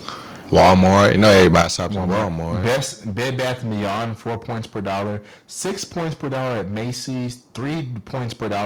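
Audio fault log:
throughout: hard clipping. Every louder syllable of the speech turns into a dense, harsh fuzz rather than occasional crackle on peaks. The signal is driven roughly 20 dB past what the chain can carry, so around a third of the samples hit the ceiling and have their tops sheared flat. Those squared-off waveforms spray added harmonics high into the spectrum, which is why the distortion sits on every loud sound instead of only on the loudest moments.
1.62 s and 2.76 s: microphone volume stepped down. Voice and background together fall abruptly in level, first by about 9 dB at 1.62 s, just before "stops at", then by a further 3 dB or so at 2.76 s. Each drop lands in a single instant with no gradual fade. This most likely comes from the call software reacting to the overloaded, clipping input by cutting the device's input volume in discrete steps. The harsh clipped texture remains after both drops.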